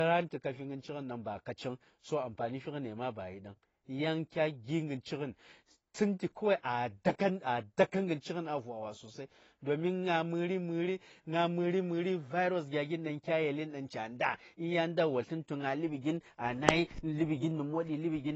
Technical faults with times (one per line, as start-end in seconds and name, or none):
0.00-18.35 AAC compression